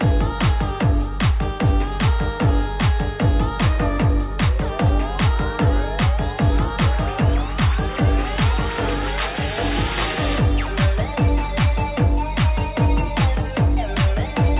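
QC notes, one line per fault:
Nothing to flag here, just the narrow phone-call sound you'd expect from a G.711 A-law path at 64 kbps, with nothing above 4 kHz.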